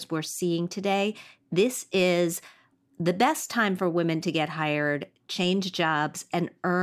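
No technical faults are audible anywhere in the speech recording.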